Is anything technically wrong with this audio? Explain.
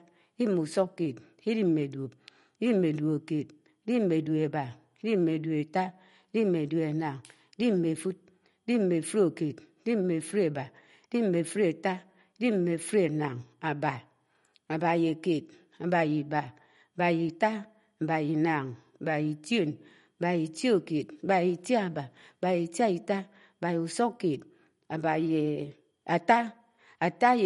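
Yes. Throughout the speech there is MP3 compression damage that is plainly audible. Nothing reaches above 11.2 kHz, so s sounds lose their top edge, and the speech has a watery, swirling texture with metallic chirps on sibilants. This is likely an encoder short of bits, which fits a low bitrate of about 48 kbps. It cuts the treble at a fixed point and keeps switching weak frequency lines on and off between frames. A plain low-pass filter would dull the sound without that shimmering, chirping residue.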